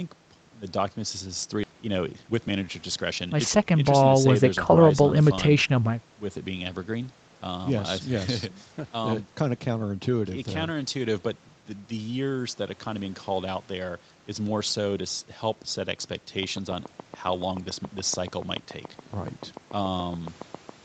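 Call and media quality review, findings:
Skip ahead at 1.63 s: playback jumps forward with no fill, and about a second of speech is simply absent. The two sides butt together almost directly. Probable component: jitter buffer discarding queued audio after an overflow, or loss in transit while later packets were already waiting. The waveform shows an abrupt splice with no silent gap. On the spectrogram, formant tracks break and restart at unrelated positions, with a thin vertical seam.

Jitter buffer speed-up from 1.73 to 3.28 s, right after the jump: speech runs at about 118% speed with pitch unchanged and sounds hurried. Probable component: jitter buffer shedding excess delay by cutting out short pitch-period-sized pieces many times in a row, about a third of a second in total. On the spectrogram, harmonics stay at the same height but syllables are compressed in time. The waveform shows small repeated discontinuities at period boundaries.

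Train of clicks from 16.43 to 20.70 s: regular ticking at 7.04 per second, around thirty clicks, peaking about 10 dB above the speech and audible in pauses too. The clicks are near-identical in shape. The likely source is electrical interference or a faulty connection or power supply injecting pulses. On the spectrogram they appear as evenly spaced vertical broadband lines up to the 8 kHz band edge of the Opus call path. The waveform shows sharp spikes on a steady grid.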